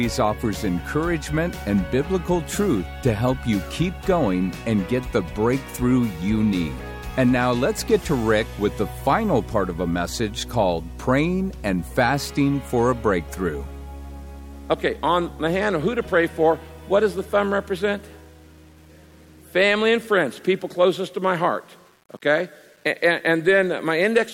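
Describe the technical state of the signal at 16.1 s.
At 16.1 s the sound carries a gritty, grainy distortion that rises and falls with the signal, roughest on quiet passages, where the lowest levels sputter or drop out. This is low bit depth without dither, present across the whole clip rather than at this moment alone. It likely comes from rounding to 8 bits with no dither, so the error tracks the audio instead of sitting as steady hiss, with noise about 35 dB below the signal.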